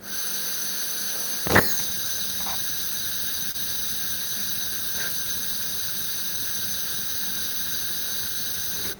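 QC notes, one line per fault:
3.51–3.56 s, short stall from a late packet: the sound briefly hangs, held a touch too long with a faint buzzy smear, then carries on. A packet arrived late and the jitter buffer emptied, so the receiver stretched the last sound for about 27 ms, adding that much delay while losing nothing.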